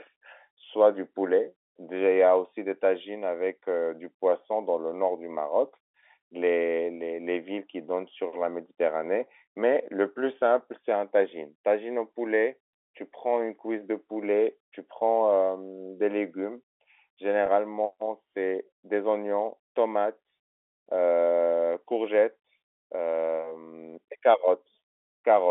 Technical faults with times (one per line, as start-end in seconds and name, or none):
17.46-17.48 packet loss with pitch repetition